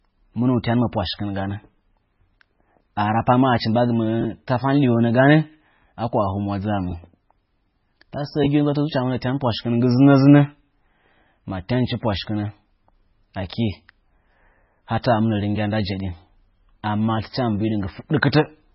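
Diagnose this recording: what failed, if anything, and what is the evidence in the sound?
The codec stage has the likely cause: heavy MP3 compression throughout. Nothing survives above 5.6 kHz, and the speech sounds watery and swirly with smeared attacks, which points to a very low bitrate, around 16 kbps. The swirl of weak frequency lines switching on and off from frame to frame, not just the treble wall, separates it from simple low-pass filtering.

Chunks out of order, a buffer or network fault, garble the sound at 4.21–4.25 s, 6.89–6.92 s and 8.44–8.46 s. Blocks of about 10.7 ms play a chunk or two late, so each event jumbles the sound but leaves no gap, unlike dropouts.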